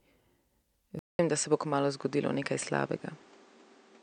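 At 0.99 s the speech drops out for 200 ms, then returns duller and boxier, with nothing above 8.9 kHz, a level shift of a few decibels and a new noise floor roughly 30 dB down, lasting to the end. The likely cause is an input switched to a poorer device.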